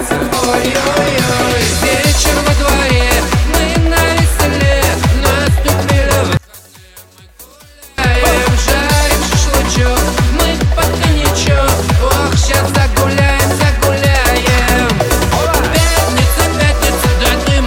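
From 6.37 to 7.98 s the sound drops by about 27 dB and nearly vanishes, with only a faint residue left. That is the signature of one channel inverted: with one side of the stereo pair likely flipped in polarity, everything common to both channels cancels when they are combined to mono, and only the small difference between them survives until full level returns.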